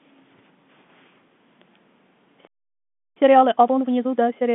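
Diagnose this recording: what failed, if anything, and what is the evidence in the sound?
A playback stall silences the speech from 2.47 s to 3.17 s, a gap of about 0.69 s, most likely a buffer underrun or blocked output thread at the player. The waveform drops to a flat line and the spectrogram shows a blank vertical band across all frequencies.

Time-compressed catch-up follows from 3.17 s to 4.45 s. The player drains its backlog at 1.5 times normal speed by cutting and cross-fading short segments, so speech sounds hurried but keeps its pitch. On the spectrogram, harmonics stay level while syllables crowd together, with faint splice seams.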